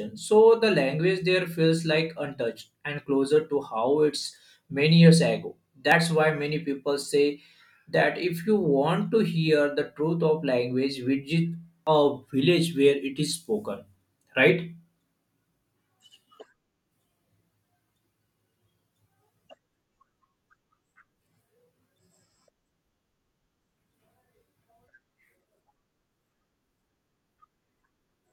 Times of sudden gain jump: none

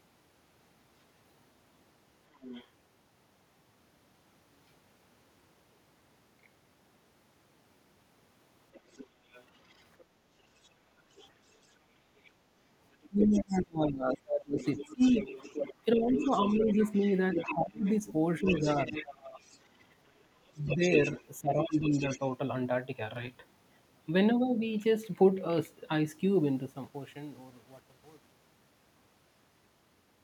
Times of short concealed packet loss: none

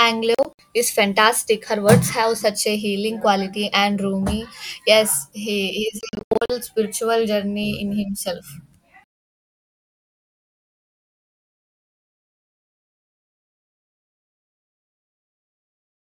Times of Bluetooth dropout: 0.35-0.59, 6.01-6.50

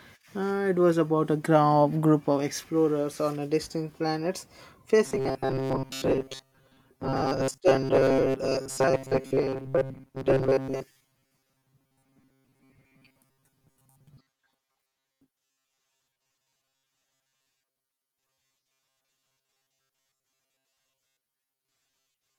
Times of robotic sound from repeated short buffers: 5.05-22.38

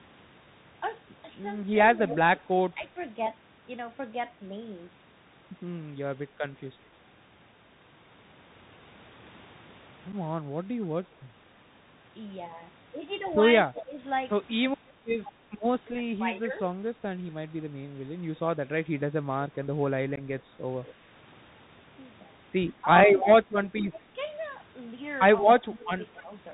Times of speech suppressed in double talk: 2.09-2.96, 13.65-17.02, 22.83-24.19, 25.59-26.31

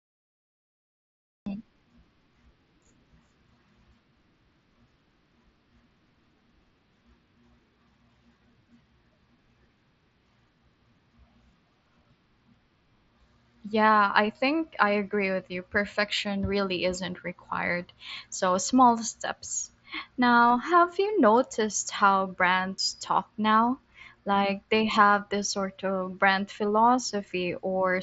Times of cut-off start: 0.00-1.46

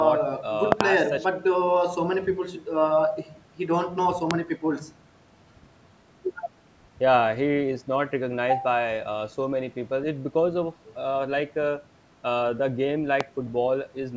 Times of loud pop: 0.72-0.83, 4.31-4.33, 13.21-13.23

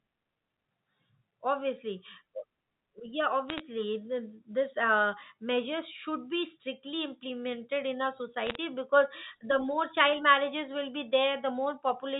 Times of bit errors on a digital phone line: 3.49-3.60, 8.47-8.55

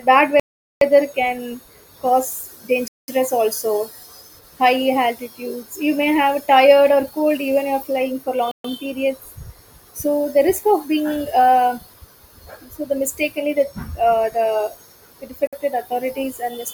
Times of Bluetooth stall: 0.40-0.81, 2.88-3.08, 8.51-8.65, 15.47-15.53

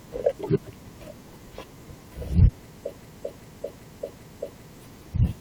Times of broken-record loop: 3.01-4.74

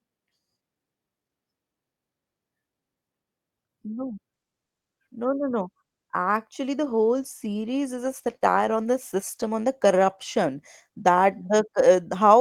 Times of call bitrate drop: 6.82-12.40

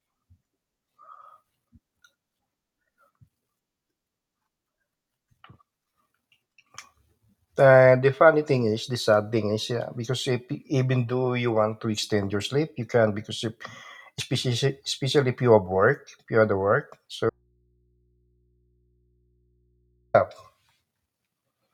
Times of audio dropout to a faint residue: 17.30-20.14

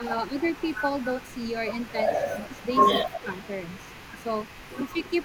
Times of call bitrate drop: none

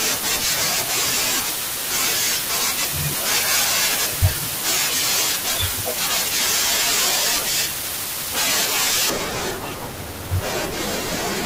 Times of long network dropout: none

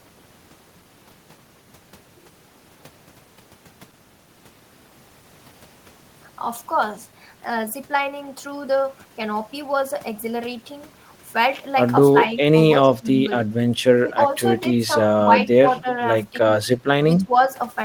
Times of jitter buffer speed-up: none

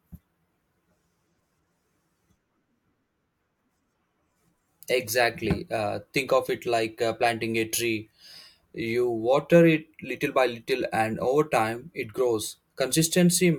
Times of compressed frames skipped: none

